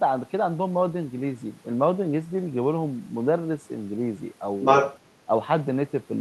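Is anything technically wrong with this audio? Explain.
Yes. Two short echo-cancellation faults occur near the end of this speech clip.

From 4.62 to 4.98 s there is other side's voice leaking through. The likely cause is that the talker's device played the far end on a loudspeaker and its echo canceller failed to subtract that pickup from the microphone signal. The result is a brief second voice, somewhat louder than the talker, about 5 dB above, that intrudes for roughly a third of a second.

From 5.26 to 5.30 s the talker's speech is suppressed in double talk. With both sides active at once, the echo canceller likely could not tell the talker from the loudspeaker echo and pulled the whole signal down. The talker's level dips by about 10 dB for roughly 40 ms. This is heard as a quick dip in the voice, all of it carried over an Opus call path with a top end near 12 kHz.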